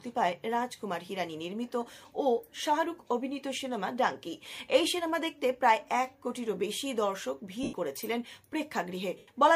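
Two short dropouts at 7.63–7.73 s and 9.18–9.28 s are lost LE Audio frames: the LC3 decoder concealed each gap of about 0.1 s by reusing the last spectrum with random signs, so the audio smears into noise.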